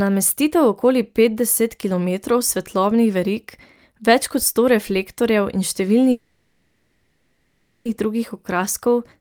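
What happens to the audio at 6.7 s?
Packets were likely held up in transit, draining the jitter buffer: a call audio freeze from 6.11 to 7.87 s. The last sound is stretched into a fading buzz, with a brief silence, then the speech resumes where it stopped, about 1.74 s late.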